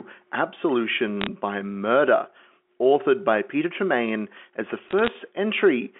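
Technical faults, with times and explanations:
1.21–1.27 s and 4.84–5.08 s, bit errors on a digital phone line: bursts of sharp crackling ticks over the speech, from flipped bits, roughly 0.15 percent, each corrupting one mu-law sample.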